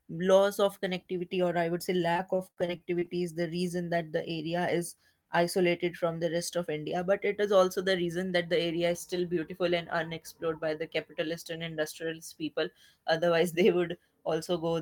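Speech, with repeated packet loss (robotic sound) from 2.13 to 3.09 s, after "or I would say" and before "is the": nine short holes, the longest 66 ms, are bridged by continuing the last sound, unlike a single isolated dropout. Then a jitter buffer speed-up from 8.05 to 8.53 s, after "it is also the" and before "area is still beautiful", trims about 50 ms and runs at 110% speed with unchanged pitch, unlike a pitch-shifting resample.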